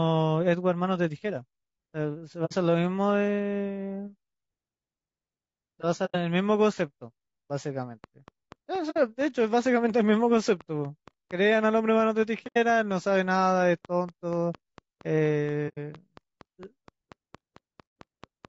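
Throughout, the speech sounds rough and grainy, with noise between the harmonics and a thin, synthetic top band. This is likely low-delay AAC compression at around 32 kbps.

At 2.45, 6.05, 8.90, 12.47, 15.68 and 17.87 s, AAC frame loss with muting leaves soft-edged holes of 60 to 90 ms. The sound fades out and back in, unlike an abrupt cut.

From 8.04 s to 18.46 s, a train of clicks ticks at a regular 4.3 per second. There are about fifty sharp pops, roughly as loud as the speech and heard in pauses too, quite unlike the smooth frame-loss gaps.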